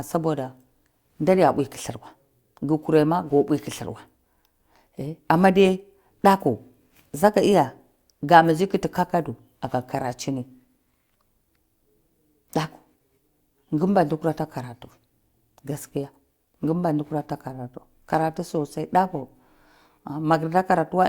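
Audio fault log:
No fault is logged for this speech.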